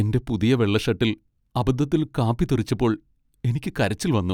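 No technical faults turn up anywhere in the recording.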